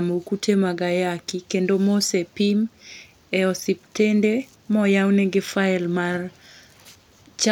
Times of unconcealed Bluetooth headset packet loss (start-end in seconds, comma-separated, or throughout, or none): none